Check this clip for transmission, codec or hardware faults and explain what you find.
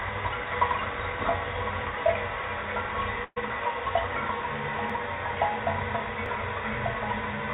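Three faults turn up, riding on a call path whose G.711 A-law coding leaves nothing above 4 kHz, so everything has that narrowband telephone edge.

From 3.24 to 3.38 s there's a burst of packet loss. The receiver stretched the last bit of sound for about 120 ms, fading it into a held buzz or hiss, then went briefly silent before the sound picked up further along with that stretch missing.

At 4.90 s there's a small jump in the sound, likely a dropped buffer (overrun): the program collected its samples too late, so roughly 10 ms was overwritten and the two sides were butted together.

At 6.26 s what is likely the same kind of dropped buffer leaves a smaller skip, losing only a few milliseconds.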